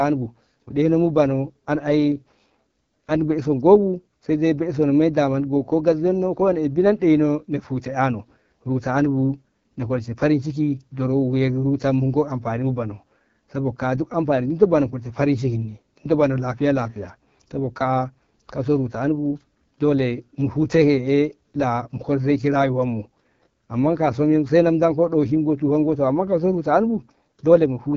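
Throughout, the speech sounds rough and raspy, with nothing above 7.5 kHz: AMR wideband (HD Voice) codec damage, consistent with a low rate near 8.85 kbit/s.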